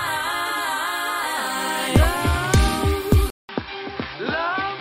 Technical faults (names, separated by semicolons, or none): input switched to a poorer device